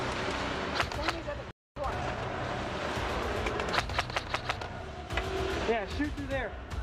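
At 1.51 s the sound just drops out for about a quarter of a second, until 1.76 s. That's a playback stall, most likely the player running dry on data or its thread getting blocked, so the output sits silent mid-flow before picking back up. Right after, from 1.76 to 2.26 s, there's time-compressed catch-up: the player trims its backlog by snipping out tiny pieces and cross-fading across the gaps, so things run at roughly 1.5 times speed. Pitch stays put, but it sounds rushed.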